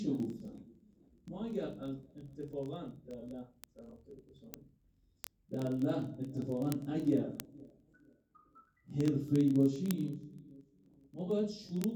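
Word clock ticks run through the audio from 0.10 s to 11.94 s: sharp clicks roughly every 30 ms, hundreds in all, uneven in strength but evenly spaced. A digital link is being read by a receiver on its own unlocked clock, drifting by several hundred ppm, so a single sample is slipped at each crossing. The steady rhythm separates this from random clicks or dropouts, which arrive irregularly.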